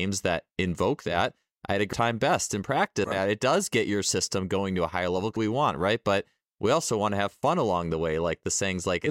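At 1.93 s, 3.04 s and 5.37 s the speech jumps forward: compressed frames skipped, each gap roughly 0.7 s, which fits several frames of 92.9 ms missing or rejected by the decoder.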